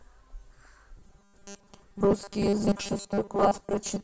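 From 0.97 s to the end: robotic sound from repeated short buffers. A rigid, metallic 200 Hz buzz. Likely 5 ms snippets looping, with most audio skipped.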